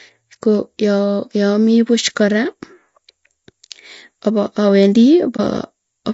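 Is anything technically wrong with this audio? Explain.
Yes. Throughout the clip, the speech sounds rough and grainy, with a hazy, synthetic-sounding top band. This is likely low-delay AAC compression at a low bitrate, consistent with about 32 kbps. Its short frames resolve voice harmonics poorly, so a spectrogram shows noise smeared between the harmonic lines and a blurred upper band.

From 5.36 to 5.40 s there is AAC frame loss with muting. The decoder zeroed a lost frame's spectrum, which is consistent with a single frame, and the overlapping windows fade the sound out and back in. You hear a brief dip. The waveform tapers smoothly down and back, and the spectrogram shows a brief vertical dip in energy.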